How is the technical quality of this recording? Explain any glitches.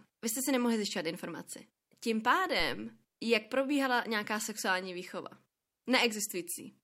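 One glitch mars the recording: a phantom power thump at 2.60 to 2.90 s, just before "jak probíhala nějaká sexuální". A supply switched on or off on the live input sends a voltage step through the coupling capacitors, producing a deep low thump peaking at about -30 dBFS that decays within roughly 67 ms.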